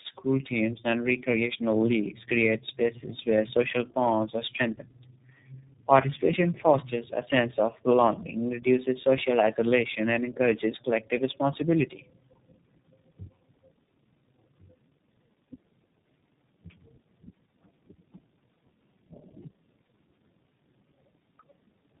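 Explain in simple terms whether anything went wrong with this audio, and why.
Throughout the recording the speech shows tandem speech coding. It sounds like it passed through three different phone-network speech coders in a row, each re-squeezing the previous one's damaged output. That leaves it rough, muffled and warbly, with nothing above about 3.8 kHz.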